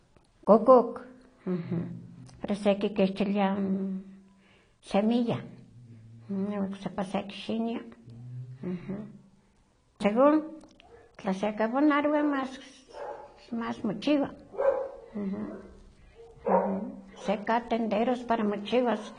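Throughout the speech, nothing reaches above 10.2 kHz. A spectrogram shows a flat ceiling there, with patchy holes below it. This is likely AAC compression: the coder discards high bands and quantises the rest coarsely, which fits AAC-LC near 32 kbps. The result is dull, smeared, with fizzy sibilants.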